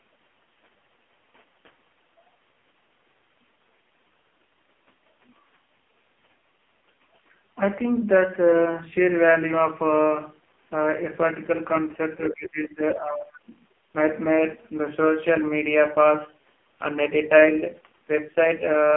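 AMR narrowband mobile codec damage runs through the whole speech recording. Nothing above 3.5 kHz survives, and the heavy buzzy, synthetic texture points to the lowest 4.75 kbps mode, where a few pulses per 5 ms subframe drive a crude vocal-tract model. Speech suppressed in double talk appears from 12.25 to 13.54 s. The voice sinks by around 25 dB and is affected for roughly a second in total, likely because an echo canceller could not separate the local talker from the far-end loudspeaker echo during simultaneous talk and attenuated everything.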